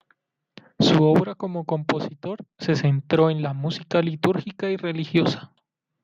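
Nothing here stands out as a technical fault; the speech just runs along as you'd expect, with nothing tripping it up along the way.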